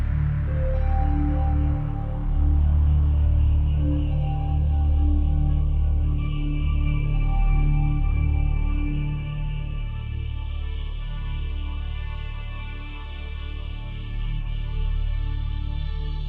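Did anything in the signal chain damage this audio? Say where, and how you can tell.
No, nothing anywhere in the chain from capture to playback has left an audible mark of damage on this recording.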